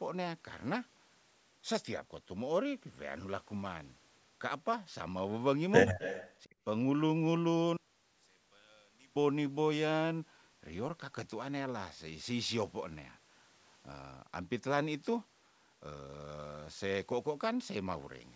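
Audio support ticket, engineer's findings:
Echo leak, 5.99 to 6.32 s. A faint delayed copy of the speech, about 15 dB below the main talker, trailing by 261 ms. Likely cause: the far end is on a loudspeaker and its echo canceller let residual pickup back into the return path. On a spectrogram, a weaker ghost of the preceding harmonic pattern is shifted right by about a quarter second. The waveform shows a low-level second envelope where the signal should be silent or clean.

Speech suppressed in double talk, 6.43 to 6.56 s. The talker's level collapses by roughly 30 dB, totalling around 150 ms, while the other side is active. Likely cause: the echo canceller could not separate near-end speech from loudspeaker echo during overlap and attenuated both. On the waveform, the envelope is abruptly notched to near silence. On the spectrogram, brief vertical gaps cut through the harmonics.

One channel inverted, 7.77 to 9.16 s. 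The centred speech nearly disappears on mono fold-down, with a drop of about 32 dB. Only a faint residue of the inter-channel difference remains. Likely cause: one stereo leg had flipped polarity over this span, so the common content cancels when summed. The spectrogram goes almost blank through the voiced bands and the low end. The mono waveform shrinks to a sliver. The band limit near 8 kHz is from the call microphone processing, which is expected.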